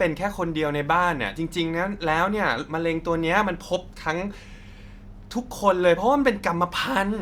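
No audible technical faults anywhere in this speech recording.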